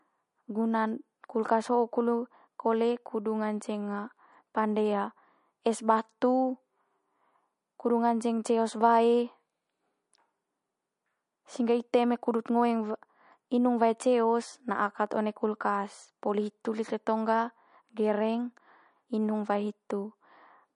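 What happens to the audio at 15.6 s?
MP3 compression runs through the whole clip, including 15.6 s. Likely short of bits, the encoder cuts everything above 10.6 kHz and drops weak detail, leaving the speech dull and watery.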